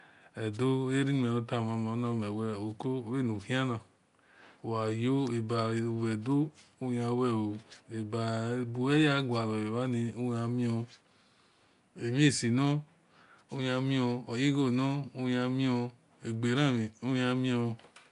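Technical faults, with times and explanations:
Throughout, Nellymoser compression: The speech carries a rough, hissy halo and a smeared, underwater quality, and the damage is plainly audible. Nothing is heard above 10.6 kHz. The likely cause is the old Flash microphone codec, Nellymoser Asao, at a rate that fits about 44 kbps. It codes short blocks with very few bits. Weak bands get no bits at all and are filled with noise. That noise fill gives the hiss and the smearing.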